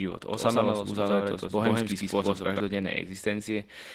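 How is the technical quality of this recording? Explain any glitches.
The recording has two clear problems: codec damage across the whole clip, and a doubled passage near the start.

Opus voice compression runs throughout. Its hybrid mode codes speech with linear prediction below 8 kHz and a transform layer above. At a rate that fits around 16 kbps, the excitation is coarse, leaving the speech hoarse and faintly robotic. Plain band-limiting would only sound dull, without this buzzy texture.

A doubled audio track covers 0.32 to 2.60 s: a second, full-band copy about as loud as the original trails it by roughly a tenth of a second. The likely cause is a slower capture path. Unlike room echo, the copy has no decay and starts and stops abruptly.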